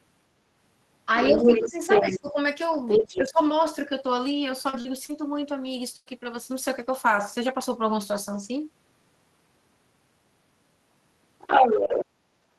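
This speech clip has three kinds of fault. A second voice leaks through at 1.2 to 2.2 s, 2.88 to 3.29 s and 11.39 to 12.06 s. It sits at roughly the talker's level, even a little above. This is the other side's voice leaking through, likely loudspeaker echo that the canceller left in the microphone signal. Over 1.32 to 2.37 s and 2.99 to 3.39 s, the talker's own voice dips while that second voice plays. It drops by roughly 10 to 15 dB, in patches. This points to speech suppressed in double talk, where the canceller turned down both voices together. From 4.69 to 6.08 s the sound turns choppy and robotic. Four gaps break it up, the longest 95 ms, with about 220 ms missing in total. This is repeated packet loss, each hole patched by stretching the previous sound.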